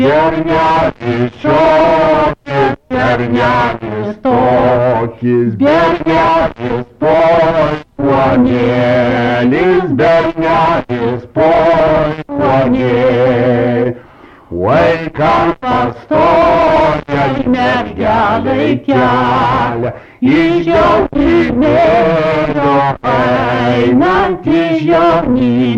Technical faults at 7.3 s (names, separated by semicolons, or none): none